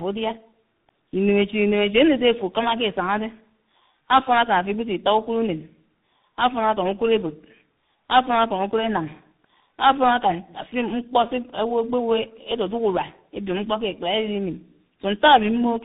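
Tandem speech coding throughout: the speech sounds decoded and re-coded in series, each coder compounding the last's damage, leaving rough, warbly, muffled speech with nothing above 3.8 kHz.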